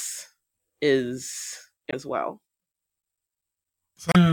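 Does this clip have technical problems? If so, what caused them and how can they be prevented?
Yes. Damaged data in a compressed stream breaks the speech twice, from 1.90 to 1.94 s and from 4.12 to 4.16 s. In both places some of the encoded bytes arriving at the decoder are corrupt, so it cannot read those frames correctly. It loses sync and hunts for the next valid frame header. For about 40 ms each time, a short chirp, squawk, click or hole replaces the speech. Checksums on the stream and reliable transport or storage would stop corrupted frames from reaching the decoder.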